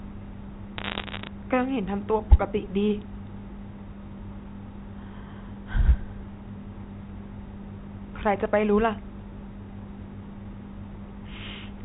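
From 0.78 to 1.27 s, the speech carries bit errors on a digital phone line. Stray flipped bits, under one percent, each corrupt a single G.711 sample. Hits on sign or high bits give sharp ticks, heard together as a short burst of crackle over the speech.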